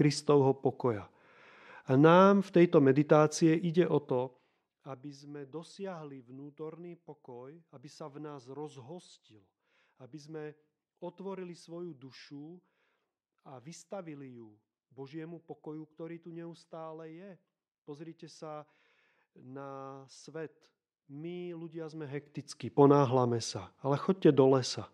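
A speech recording with zipper noise from 3.93 to 5.18 s. Across that stretch the level drops by roughly 20 dB. The drop is not smooth. It moves in coarse steps, around forty a second. Each step jumps the gain abruptly, and each jump leaves a tiny click. Together the clicks form a fast ticking buzz on top of the speech. The gain is likely updated once per buffer with no ramping between values.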